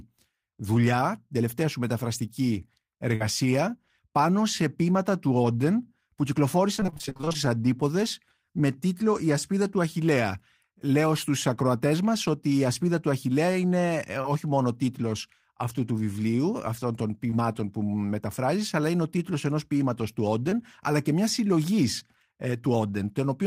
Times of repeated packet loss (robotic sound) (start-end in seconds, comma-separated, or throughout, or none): 6.76-7.36